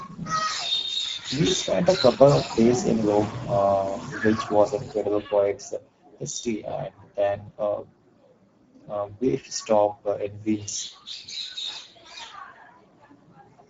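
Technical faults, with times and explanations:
Throughout: Speex codec. The speech sounds noisy and hoarse, and nothing reaches above 7.7 kHz. The CELP coder has too few bits for its excitation, which fits a bitrate near 10 kbps. Unlike a plain low-pass filter, it roughens the voice itself.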